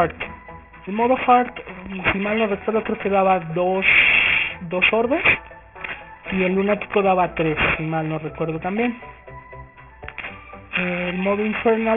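From the first second to the end there's aliasing: the audio was downsampled without a proper low-pass, so everything above 3 kHz folds back down as unrelated tones, roughly as loud as the real material. That fits a drop to around 6 kHz sampling. Highs sound gritty and metallic, crammed against the band edge.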